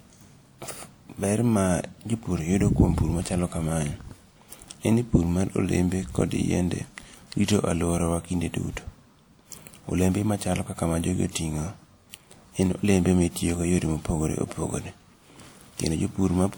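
Across the whole speech clip there is a case of low-bitrate audio saved at a high bitrate. The spectrum reaches up to about 20.1 kHz, which points to a 320 kbit/s MP3 container. But the coarseness of the sound does not match that rate, and is likely left over from an earlier WMA encode at around 64 kbit/s. Unlike a plain low-bitrate file, the band edge does not reveal the damage. Re-encoding at a high rate preserved the first codec's losses rather than repairing them.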